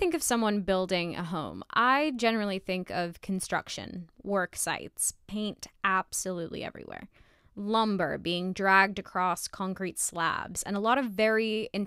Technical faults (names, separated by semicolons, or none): none